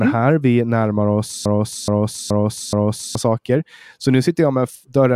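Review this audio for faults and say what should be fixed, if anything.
Right after "närmar oss", at 1.46 s, the speech gets stuck in a broken-record loop: a 0.42 s fragment plays four times back to back until 3.15 s, and whatever should have come in that stretch is simply gone. That's likely a stall in the player, encoder or stream, which kept pushing out the last chunk it had. To prevent it, watch for buffer underruns upstream and have the pipeline output silence instead of re-sending stale audio.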